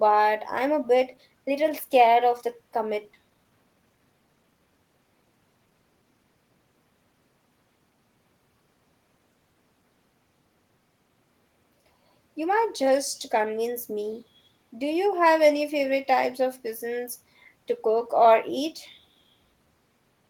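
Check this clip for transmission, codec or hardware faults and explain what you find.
Two transmission faults, both right around the three-second mark.

Skip ahead at 3.13 s: a little under half a second of speech gets dropped, nothing fills it, and the two sides butt together, so it lurches forward.

Jitter buffer speed-up from 3.23 to 4.67 s: the buffer's overfull, so tiny pitch-period slices get trimmed, about 0.2 s total. Speech runs about 13% fast, same pitch, rushed.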